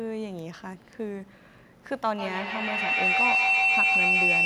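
Speech clip with feedback howl from 2.18 s to the end: a loop of two devices builds a pulsing tone near 3 kHz, repeating roughly every 150 ms, peaking about 9 dB above speech, growing rather than fading like echo.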